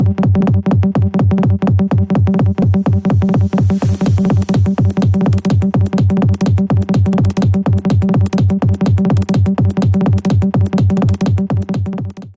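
Everything runs at double speed and sits a full octave high, 12 semitones up, for the whole clip, so the sound is chipmunk-bright and hurried. That is the signature of a wrong sample rate: the samples are clocked out twice as fast as they were captured, with no resampling, so timing and pitch shift together by the same factor of 2.0. The ratio fits audio recorded at 8 kHz being played back at 16 kHz.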